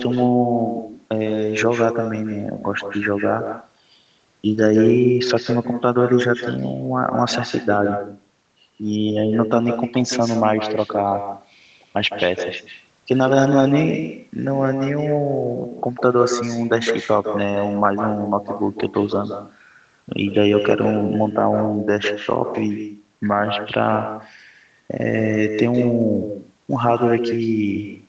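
Throughout, with no echo canceller, the far end's microphone picks up its loudspeaker, so each phrase returns roughly 150 ms later, about 7 dB quieter and thinner.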